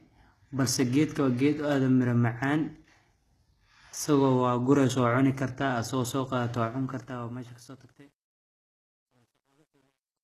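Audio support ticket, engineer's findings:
Codec: likely HE-AAC, fitting a 16 kbps stream. Only the lower band is coded, and the treble is rebuilt by spectral band replication, so upper harmonics miss the core. Plainly audible codec damage throughout: gritty, metallic or lispy s sounds, nothing above 12.4 kHz.

Fade stage: truncation distortion, no dither, resolution fitting a 10-bit path. Starts 6.55 s, after "cuni kartaa asoo soo", and runs to the end. The falling level collapses into coarse steps, so the quiet tail turns gritty, worst from 7.64 s to 10.24 s.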